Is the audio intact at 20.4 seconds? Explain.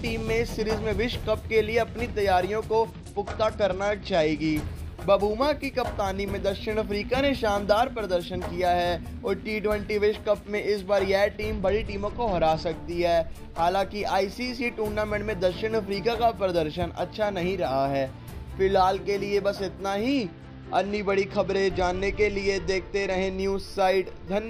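No. From 20.08 to 23.40 s the treble goes dull and a gritty noise rises. This is a Bluetooth SBC bit pool drop: the congested link forced fewer bits, starving the top sub-bands and coarsening the rest, consistent with a bit pool falling from 31 to 11, around 83 kbps.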